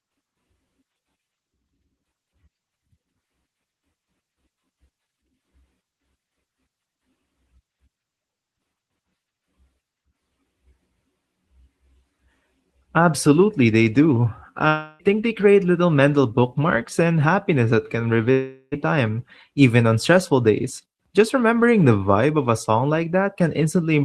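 Speech, carried over what sounds like an Opus call path with content stopping near 12 kHz, breaks up twice in what is likely a long network dropout: from 14.67 to 15.02 s, just before "think they create little", and from 18.31 to 18.75 s, right after "and happiness that can". Roughly 0.32 s and 0.4 s of speech never arrive. The receiver stretches the last sound into a fading buzz, so the waveform shows a smooth, decaying smear, and the spectrogram shows blurred, repetitive bands instead of crisp syllable structure.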